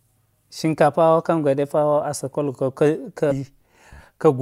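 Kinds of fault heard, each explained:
Damaged data in a compressed stream: corrupted bytes make the decoder misread frames and resync, heard as a brief glitch near 3.3 s, lasting 22 ms.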